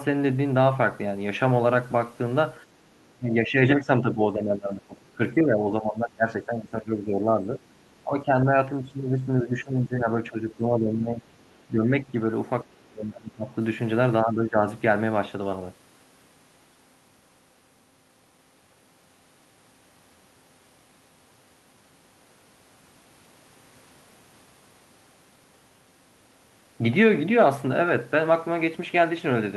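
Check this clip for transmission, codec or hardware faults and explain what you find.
The speech shows echo-control faults during overlapping talk.

Speech suppressed in double talk occurs at 3.13–7.63, 8.03–11.28, 11.71–12.15, 12.64–13.53 and 14.22–14.62 s. The speech dips audibly, by roughly 10 to 20 dB at worst, likely because the echo canceller misjudged simultaneous talk as echo and attenuated everything.

The other side's voice leaking through appears at 11.40–11.63 and 12.78–12.83 s as faint fragments around 40 dB below the speech, likely loudspeaker pickup the echo canceller failed to subtract fully from the microphone signal.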